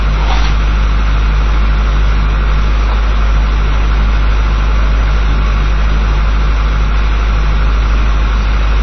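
Throughout the sound there is plainly audible damage, likely from heavy MP3 compression. Nothing survives above 6 kHz, so the top end sounds dull. Starved of bits, faint detail flickers in and out, giving a watery swirl and smeared attacks. That fits a bitrate near 23 kbps.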